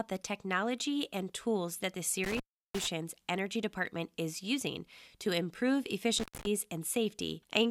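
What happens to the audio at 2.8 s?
At 2.8 s the speech is near the tail of a dropout. Right after "and tools that the", the sound cuts out with crackle at its edges, leaving faint hiss, across the stretch from 2.24 to 2.87 s, with the line open for about 350 ms of that. This is an intermittent contact: a loose cable or plug briefly breaks the connection, so the signal vanishes and the scraping contact crackles as it opens and closes again.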